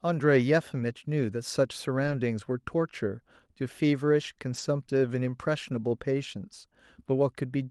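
Lost packets rebuilt from error correction at 2.03–2.13 s, 4.53–4.59 s and 5.63–5.77 s: instead of gaps, the speech turns briefly rough and noisy as the decoder plays lower-quality backup copies carried in the following packets, consistent with separate losses of roughly three, two and four packets.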